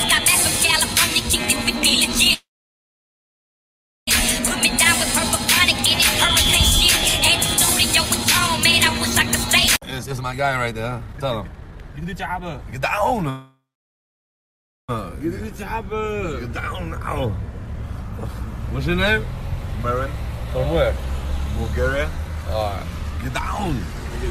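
At 2.33 s the sound stops and is held as a brief fading buzz, then about 1.64 s of silence, before resuming at 4.09 s exactly where it left off. This is a call audio freeze, likely from delayed packets draining the jitter buffer. About 1.74 s of gap is inserted and nothing is lost.

From 9.8 s to 15.39 s a jitter buffer speed-up runs at 127% speed with unchanged pitch. The receiver trims short pitch-period slices to work off the built-up delay, around one and a half seconds in total, so the sound feels noticeably hurried. Within that stretch, a second call audio freeze occurs from 13.29 s to 14.91 s. It is likely caused by another packet delay and adds a 1.59 s gap, about 1.31 s of it silent, with no audio lost.

Milder speed-ups follow at 110% from 17.52 s to 18.29 s and at 108% from 22.11 s to 24.24 s, where the rushing is slight.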